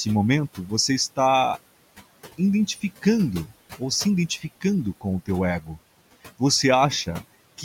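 Noise suppressor artifacts run through the whole speech clip. The suppressor pulls steady noise down by about 17 dB, so the background sinks in pauses and rises under speech.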